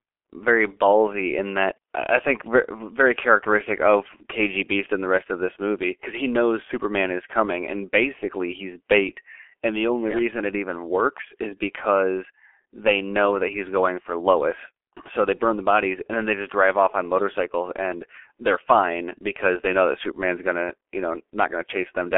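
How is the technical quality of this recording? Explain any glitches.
The quality is poor throughout, limited by heavy low-bitrate codec damage across the whole recording.

G.723.1 codec, throughout: the speech passes through a telephone line band of roughly 300 Hz to 3.4 kHz with nothing above 3.7 kHz, and the coarse, slowly updated frame-based coding, consistent with about 6.3 kbit/s, leaves voices muffled and hoarse and smears consonants.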